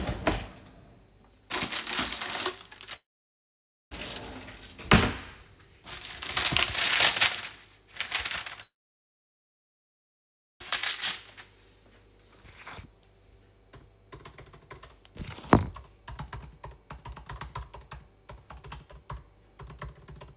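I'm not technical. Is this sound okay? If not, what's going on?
No. The sound cuts out twice, from 2.96 to 3.93 s and from 8.63 to 10.62 s. Each time there's a short fading buzz, then near-silence, and the sound resumes with that stretch simply gone. This is likely a long network dropout. The audio stopped arriving for about one second and then about two seconds, and the receiver briefly stretched the last bit before giving up. The call line it came through also carries nothing above 4 kHz, so the sound is dulled throughout.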